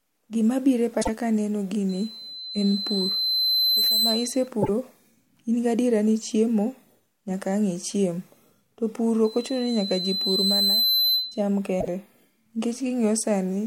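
Frames lost from the MP3 stream, likely a broken MP3 bit reservoir, leave the following frames borrowing the wrong bytes. The speech jumps ahead with a brief chirp or hole lasting roughly three 26 ms frames, first from 1.01 to 1.09 s between "biro e" and "ka aneno", then at 4.61 to 4.69 s and 11.80 to 11.88 s. After "ka aneno", a microphone picking up its own loudspeaker produces a loudspeaker feedback squeal. A 4.1 kHz tone swells from 1.89 to 4.48 s over about two seconds, and again from 9.24 to 11.43 s over about one and a half, peaking about 5 dB above the speech.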